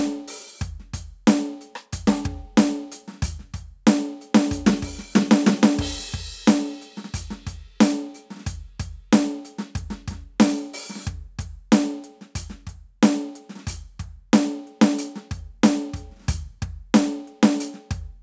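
Nothing stood out on listening to this music, which carries the narrowed band of call microphone processing, with no content above 8 kHz.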